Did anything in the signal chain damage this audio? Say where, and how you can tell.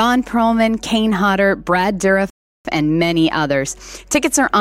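Yes, a rebuffering stall at playback: at 2.30 s the sound drops to silence and picks up at 2.65 s exactly where it left off. The player's buffer ran dry, so it paused about 0.35 s waiting for data. Nothing's missing, just time inserted.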